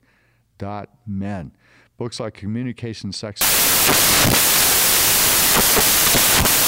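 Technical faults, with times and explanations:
3.41 to 6.67 s, samples built from the wrong bytes: the speech turns into loud, harsh broadband noise. Bytes combine wrongly, so fast-changing low bits dominate each sample.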